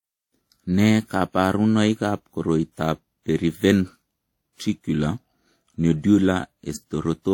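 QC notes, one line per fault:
Throughout, transcoding between lossy codecs: two codecs' artefacts stacked on the speech, nothing above 18.5 kHz, likely a WMA encode re-encoded as low-bitrate HE-AAC.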